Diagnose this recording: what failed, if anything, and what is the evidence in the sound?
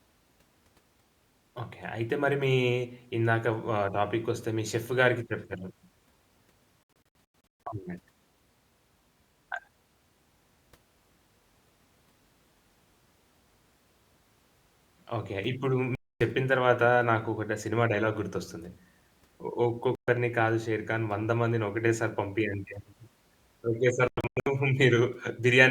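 The speech drops out at the reception stage, a digital broadcast dropout where the receiver mutes while corrupted frames fail their checks. The holes are at 6.84–7.67 s (about 480 ms lost in short bursts, longest 128 ms), 15.95–16.21 s, 19.95–20.08 s and 24.08–24.47 s (scattered, longest 96 ms). Gap lengths fit 32 ms frames. The waveform goes flat and the spectrogram shows clean full-band vertical blanks, with the missing audio never recovered.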